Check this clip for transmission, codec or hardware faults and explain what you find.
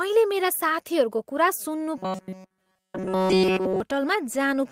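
There's one fault worth flagging: robotic sound from repeated short buffers, from 1.98 to 3.80 s. The speech goes rigid and metallic, locked to a 188 Hz buzz throughout that stretch. That's likely the software looping a roughly 5 ms chunk while fresh audio arrived too slowly.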